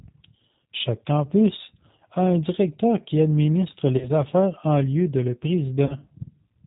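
Throughout this speech clip the G.729 codec damage is plainly audible. Nothing passes above 4 kHz, and the voice has the slightly rough, synthetic grain of speech rebuilt from a vocal-tract filter, a pitch predictor and a few pulses per frame, which fits an 8 kbit/s G.729A stream. A plain low-pass filter would only dull the sound. Here the sound is also rough, which shows the signal is being rebuilt from a model rather than only filtered.

VoIP packet loss concealed by the speech codec occurs twice. The first comes right after "un directeur qui administre", from 3.98 to 4.23 s. The second follows "en lieu de le", from 5.86 to 5.95 s. Each gap points to a single lost 30 ms packet, and the decoder fills it by repeating its last pitch and filter at falling gain. Unlike a clean dropout to silence, these gaps come out as a brief buzzy tone or coloured noise that fades. The voice also stays weak or smeared well past the missing 30 ms because each new frame builds on the damaged one before it.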